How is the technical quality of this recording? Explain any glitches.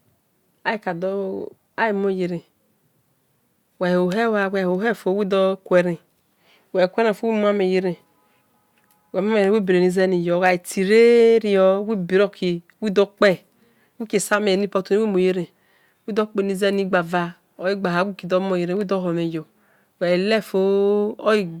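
Brief crackles break into the speech on four peaks, at 5.77 to 5.80 s, 10.45 to 10.49 s, 13.25 to 13.27 s and 14.33 s. This is hard clipping. Those peaks overshoot the signal chain's ceiling by about 1 to 2 dB, so their tops are sheared flat, adding harsh high harmonics.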